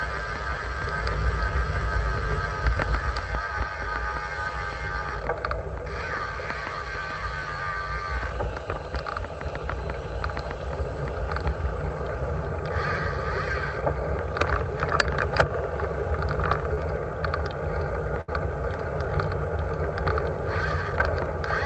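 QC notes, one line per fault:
16.74–16.79 s, short concealed packet loss: A brief smear with a wobble, then the sound carries on, though a sliver of it is gone. A few hundredths of a second of the stream arrived too late for the decoder, so the receiver extended the preceding sound for about 30 ms to cover the hole and then blended back into the real signal. About 20 ms of the original audio was skipped in the process.
18.21–18.30 s, burst of packet loss: A longer stretch where the sound turns into a held, fading continuation of whatever came just before, then picks up further along. Several consecutive packets failed to arrive in time, so the receiver kept extrapolating the last sound and lowered its level for roughly 67 ms. When real audio resumed, about 60 ms of the original was missing.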